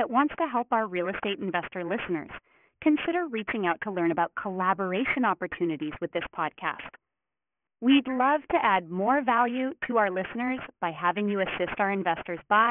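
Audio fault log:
throughout: aliasing. Content above 3 kHz folds back below it, which fits a drop from 44.1 kHz to a 6 kHz rate without an anti-alias filter. Sibilants turn gritty with unrelated tones about 15 dB under the speech, and the spectrum runs hard to the 3 kHz edge.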